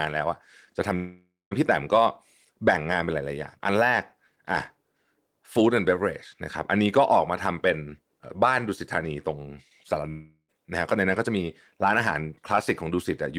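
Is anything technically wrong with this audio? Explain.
Yes. The speech cuts out twice, from 0.95 to 1.53 s and from 10.09 to 10.50 s, and each gap matches a long network dropout, likely caused by packets failing to arrive. The receiver stretches the last sound into a fading buzz before it goes quiet: about 0.2 s of near-silence in the first gap, about 0.08 s in the second. Speech then resumes with roughly 0.56 s and 0.4 s missing. On a waveform, each gap shows a decaying tail flattening out. On a spectrogram, a smeared, featureless band fades to darkness before normal harmonic structure returns.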